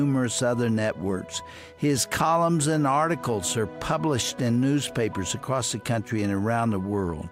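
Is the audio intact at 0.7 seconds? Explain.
Yes, at 0.7 seconds the audio plays through cleanly, with no dropout, click, distortion or other fault audible at that point.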